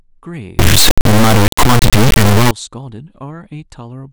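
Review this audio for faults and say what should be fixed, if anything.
From 0.59 to 2.51 s, the speech turns into a loud buzzing square wave that drops out in quiet moments. This is integer read as float. It points to 32-bit integer samples being decoded as 32-bit float. To prevent it, check that the sample format declared at every read matches the format that was written.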